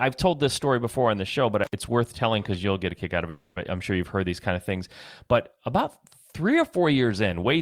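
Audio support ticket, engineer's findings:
Intermittent contact at 1.64 to 1.73 s, between "on the show but" and "worth telling because you'll". The audio breaks for about 67 ms, with crackle at both edges. Probable component: a loose cable or plug. The connection opens briefly, then closes again.

Call audio freeze at 3.29 to 3.58 s, after "a kick out of" and before "it I'm sure you've". The last sound is held for 270 ms as a fading buzz or hiss. There is no silence. The audio then resumes where it stopped. Nothing is lost, but everything after it runs 270 ms late. Likely cause: held-up packets emptying the jitter buffer.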